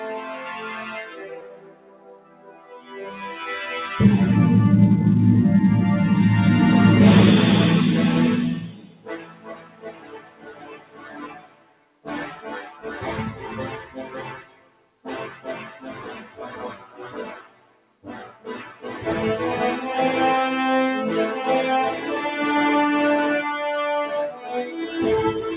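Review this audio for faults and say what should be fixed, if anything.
Throughout the clip the level pumps and flutters: sustained parts sink away while sharp onsets stay fairly intact, and tails thin out instead of ringing naturally. This is a noise suppressor applied to music or sounds. A suppressor tuned for speech treats steady tones, ambience and decay as background noise and pulls them down, so the level swings by about 15 dB depending on how stable the sound is at each moment.

The sound cut by the noise suppressor is most obvious in seven places. The longer stretches run from 1.05 to 2.94 s, 8.68 to 12.06 s, 14.37 to 16.4 s and 17.34 to 18.85 s, each dipping by as much as about 13 dB as held material fades and decays are cut short. Shorter dips of about 8 to 10 dB occur at 12.69 to 12.85 s, 16.74 to 17.01 s and 24.31 to 24.51 s. The narrow top end, with nothing above 4 kHz from the G.711 call path, comes from that codec and is not part of this fault.

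To prevent this, disable noise suppression, or switch the call into a music or original-sound mode, whenever non-speech audio is sent.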